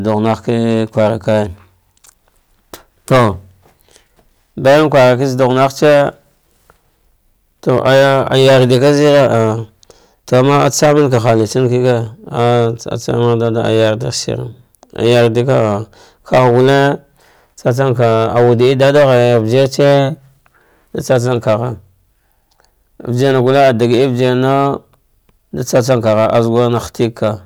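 Right from the start and all the way through, the speech runs into hard clipping: it's pushed roughly 12 dB past what the stage can pass, so about one sample in twenty gets sliced flat, and every louder syllable comes out with a harsh, buzzy fuzz.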